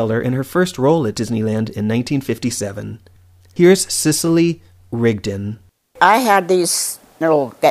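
No faults are audible anywhere in this speech recording, so there is nothing to report by time or cause.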